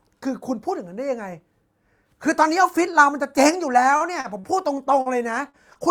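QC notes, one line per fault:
3.91–4.56 s, repeated packet loss (robotic sound): across this 0.65 s stretch the stream broke up five times in quick succession. Each gap was bridged by extending the last received sound, with roughly 133 ms synthesised in all, about 22% of the span, and 40 ms genuinely lost, no single gap longer than 40 ms. Because each patch barely ends before the next begins, the audio turns choppy and takes on a robotic edge with fragments missing.
5.02–5.08 s and 5.49–5.56 s, short concealed packet loss: twice, about 40 ms of audio never arrived in time to be decoded. The receiver covered each hole with about 38 to 39 ms of continuation, carrying forward the pitch of voiced sound or shaped noise for unvoiced sound, then crossfaded back into the real signal. Each is heard as a brief smear or wobble, and a short consonant caught in the gap can disappear entirely.
5.73–5.78 s, short stall from a late packet: a packet arrived about 20 ms behind schedule, draining the jitter buffer. 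Instead of skipping, the receiver held the last sound for about 20 ms until the data turned up, then resumed from exactly where it left off. Nothing is lost, but that moment is drawn out slightly too long, with a faint buzz or dip as the stretched sound hangs.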